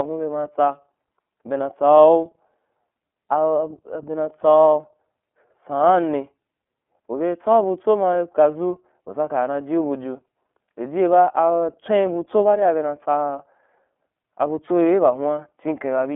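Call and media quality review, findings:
iLBC codec, whole clip: speech band-limited to a 250–3400 Hz phone line, nothing above 3.7 kHz, plainly rough and synthetic. Each 30 ms frame's excitation is coded independently, which fits the 13.33 kbps iLBC mode. Check endpoint codec negotiation.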